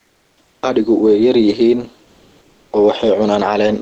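From the start to 0.61 s, and again from 2.05 to 2.71 s, the gaps carry comfort noise in place of the background. The sender likely stopped transmitting during the pauses, which points to Opus DTX, and the receiver substituted steady synthetic hiss, about 40 dB below the loud parts. The first patch sits about 7 dB lower than the real background; the second matches its level. On a spectrogram these stretches look smooth and uniform, without the real background's texture.

Gain pumping runs throughout. Excessive gain, likely tamed by a fast limiter, pulls the level down around 5 dB on each loud sound. The waveform shows a flattened envelope, all within the call codec's band, which stops near 8 kHz.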